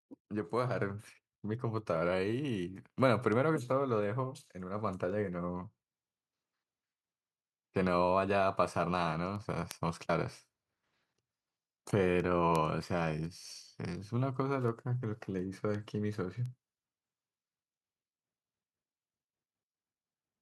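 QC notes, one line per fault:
0.13–20.36 s, word clock ticks: there's a sharp tick of uneven strength roughly every 0.4 s right through the speech, around fifty of them. Whatever received this digital link wasn't locked to the sender's clock, so the two drift apart by something like 70 parts per million. Each time they slip a full sample, one sample gets dropped or doubled and a few around it are misread. That little discontinuity is the tick, and the drift rate sets the steady spacing.
0.29–5.69 s, automatic gain rising: over these first five-odd seconds the level climbs by about 7 dB, slowly enough that it reads as a swell rather than a jump. The automatic gain control decided the input was too quiet and kept turning it up. Because it scales the whole signal, the background comes up right along with the speech, which is what gives it away over a simple change in how loudly someone is talking.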